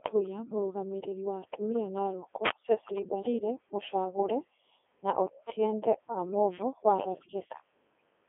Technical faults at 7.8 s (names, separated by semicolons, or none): Codec 2 vocoder